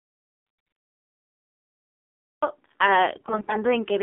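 The whole clip sounds boxy and buzzy, with a thin, synthetic edge and nothing above about 3.6 kHz or below 200 Hz. That is the AMR narrowband mobile codec: at a low rate of around 7.4 kbps, its vocal-tract model, driven by sparse pulses, audibly strips and simplifies the speech.

From the very start until 2.42 s there is complete silence with no room tone at all. This is an audio dropout to silence, the input most likely lost through a disconnection, failed link or mute while silence kept being written.

Between 0.46 and 0.78 s, inside that silent stretch, and again from 3.16 to 3.58 s, where the sound turns hoarse, scratchy and gargly while holding roughly its pitch and level, there are AMR bit errors: on a weak link, roughly a tenth and then about 15 percent of the less-protected bits arrived flipped, misplacing the excitation pulses and skewing gain and spectrum values.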